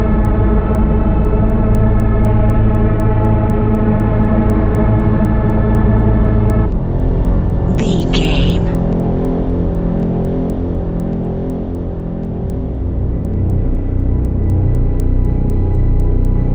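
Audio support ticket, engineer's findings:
Resampler restarted on every block, whole clip. Regular ticks at 4.0 Hz, one per 250 ms block, only while signal is present. The 16 kHz to 48 kHz converter treats each block alone, so edge samples lack true neighbours and each boundary carries a small error. Unlike buffer underruns, there are no gaps, the spacing is strictly periodic, and the ticks vanish in quiet passages.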